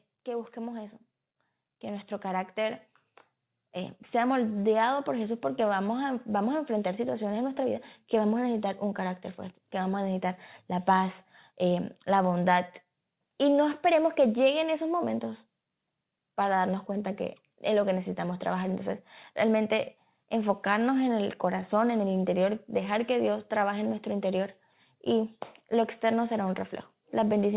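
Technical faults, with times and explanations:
0.24–10.48 s, automatic gain rising: the speech and the background noise swell together by about 10 dB over roughly ten seconds, settling just before "la paz". The gain control judged the input too quiet and kept raising its amplification gradually.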